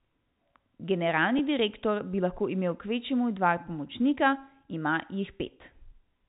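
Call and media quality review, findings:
Packet loss with pitch repetition at 1.38 s, just before "direktor bi lahko imel": brief buzzy hold on the speech, one 10 ms gap bridged by repeating the last pitch period. Probable component: jitter buffer / PLC. Telephone band, G.711-style, none or faint coding damage.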